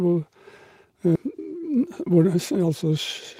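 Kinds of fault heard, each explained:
skip ahead: at about 1.15 s roughly 0.7 s of speech vanishes and playback jumps straight on with no gap, unlike a dropout, which leaves silence.
jitter buffer speed-up: from about 1.26 s to 2.91 s speech runs about 6% fast at unchanged pitch, trimming roughly 0.1 s gradually rather than in one jump.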